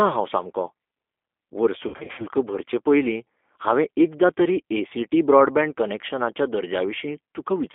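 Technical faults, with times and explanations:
Throughout: G.729 codec. The band runs only from 250 Hz to 3.5 kHz, and speech sounds rough and synthetic, which fits an 8 kbit/s G.729 coder.
1.88–2.25 s: VoIP packet loss concealed by the speech codec. About 210 ms of gaps over 300 ms are smeared into a fading buzz or coloured noise, and the voice stays weak or distorted just after, on "भरचे पयलीं".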